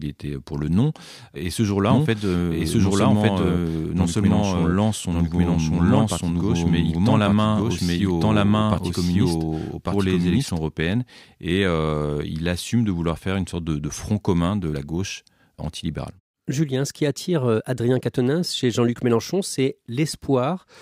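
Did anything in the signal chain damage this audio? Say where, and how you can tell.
Yes. From 1.91 s to 10.59 s, just before "européennes et il assume", a doubled audio track appears: a second full-band copy of the speech about a second behind, at roughly equal level, likely from a duplicate capture path or misaligned edit. Unlike echo, it has no decay or room colour and cuts in and out abruptly.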